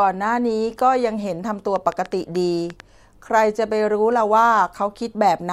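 From 1.76 s to 2.81 s a train of clicks runs over the speech: about seven sharp ticks, roughly 5.8 per second, unevenly spaced, each peaking a few decibels above the voice. The pulses share the same shape and keep coming regardless of what the talker does, which separates them from clipping distortion or crackle that follows loud syllables. Their likely source is interference from nearby equipment or a faulty connection or power supply injecting pulses into the signal.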